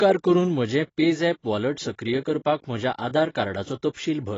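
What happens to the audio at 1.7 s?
At 1.7 s you're hearing AAC compression, which runs through the whole clip rather than starting there. The speech is cut off above 7.9 kHz and sounds dull and smeared with a fizzy edge, likely from AAC-LC at a low bitrate, consistent with roughly 24 kbps.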